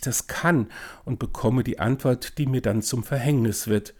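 No technical faults can be heard anywhere in the recording.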